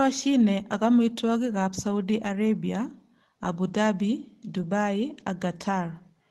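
At 3.67 s and again at 4.61 s, a lost packet was rebuilt from error correction: the following packet's low-bitrate copy filled each 20 ms slot, so there's no gap, just a brief rougher, noisier patch. A spectrogram shows a short smeared, grainier column with no dropout in the waveform.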